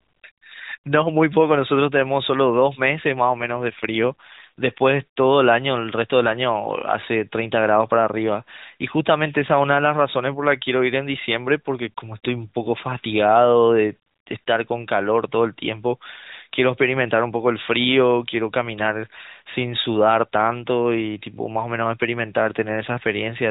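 From 3.12 s to 4.67 s the speech becomes rougher and more synthetic, with a buzzy texture, then recovers. This is an AMR rate drop: the codec's bit budget was cut mid-call, with the difference typically going to error protection on a weak link. The sound points to a step down from the 12.2 kbps mode to roughly 5.9 kbps. The narrowband band edge near 4 kHz stays unchanged throughout, and there is no gap in the audio.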